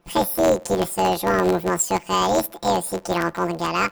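A speech clip with planar audio read as interleaved, running throughout. The blocks last about 11.6 ms, which fits a 512-sample buffer. Each block plays its left half, then its right, at double speed. Blocks this short give a robotic buzz at 86.1 Hz. There is no clear octave shift.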